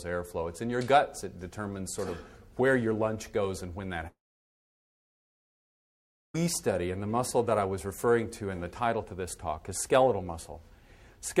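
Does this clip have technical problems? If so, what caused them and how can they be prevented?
Yes. A long network dropout runs from 4.07 to 6.35 s: the sound decays into a brief fading buzz, then about 2.2 s of silence, and resumes with roughly 2.3 s missing, likely because packets stopped arriving and the receiver concealed the gap. A more stable connection with a larger jitter buffer and packet-loss recovery would prevent it.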